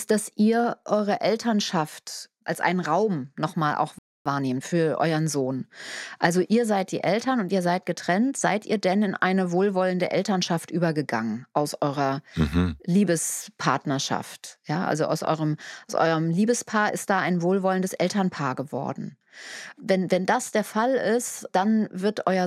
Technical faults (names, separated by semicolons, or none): playback stall; time-compressed catch-up